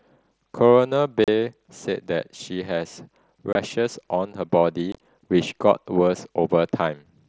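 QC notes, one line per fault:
1.24–1.28 s, 3.53–3.55 s, 4.92–5.00 s: unconcealed Bluetooth headset packet loss. The speech drops into abrupt holes of 37.5 ms and 22.5 ms, then turns crackly and chopped where 52.5 ms of gaps scatter across 75 ms. Lost headset voice packets were replaced by silence or an idle pattern instead of being concealed.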